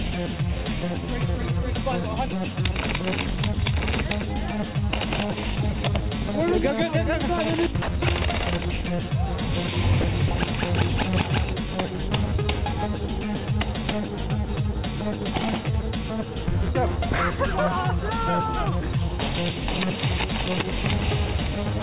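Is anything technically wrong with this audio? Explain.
Yes. There is sound dropped by the voice detector at 7.82–7.88 s (60 ms), 10.01–10.04 s and 10.28–10.31 s (30 ms each). The sound briefly gives way to a flat comfort-noise fill. The likely cause is the sender's detector treating quiet material as background and pausing transmission. The call path, band-limited with nothing above 4 kHz, fits G.711 A-law.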